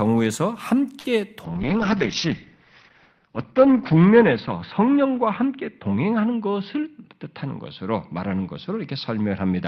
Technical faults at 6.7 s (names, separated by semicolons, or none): call bitrate drop; jitter buffer speed-up